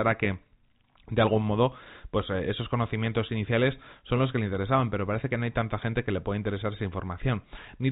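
No technical faults are present.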